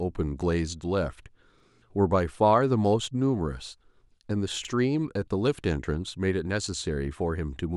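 A speech clip with overlapping chunks. At 1.60 to 1.65 s and again at 4.65 to 4.70 s, about 48 ms of sound plays twice. Each join causes a brief stutter. The joins fall 3.0 s apart, which points to 3-second chunks starting early.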